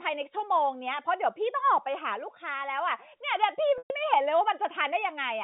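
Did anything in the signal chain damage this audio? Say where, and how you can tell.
Yes. Packet loss with pitch repetition in the network stage, from 3.78 to 3.90 s: a 120 ms gap, about six 20 ms packets, where the receiver repeated the last pitch period as a brief buzzy hold, faded it to silence, then cross-faded back into the speech, which stays within the 150 Hz to 3.7 kHz telephone band of G.711.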